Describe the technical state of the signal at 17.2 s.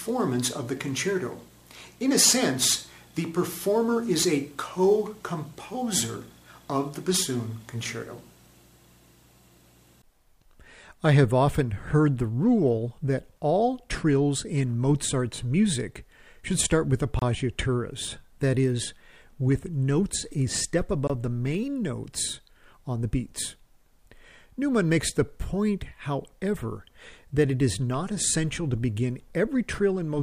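At 17.19 to 17.22 s the sound drops to silence for 27 ms, then resumes. This is a Bluetooth stall, likely from interference delaying packets until the headphone buffer emptied. The waveform shows a flat gap; the spectrogram, a clean vertical blank band across all frequencies.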